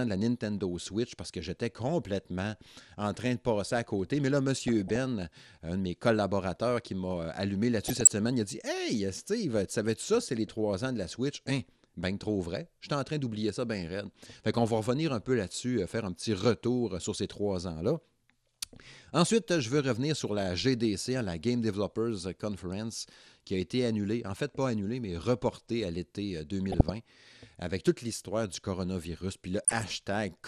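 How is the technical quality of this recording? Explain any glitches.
The technical quality is compromised: the speech is dull and grainy throughout, with four brief bursts of distortion.

MP2 compression runs throughout: upper sub-bands drop out and flicker while the remaining bands are coarsely quantised, giving a muffled, gurgling graininess. The likely cause is MPEG Layer II coding at a low rate, which fits about 80 kbps. Unlike the burbling, it is steady rather than bursty.

DAB burbling strikes at 4.68–4.96 s, 7.85–8.12 s, 26.66–26.97 s and 29.57–29.86 s. Bit errors at a low rate slip past error correction: corrupted samples put short blips of noise into single sub-bands, and corrupted scale factors make sub-bands jump in level. These brief, erratic bursts set it apart from the constant compression grain.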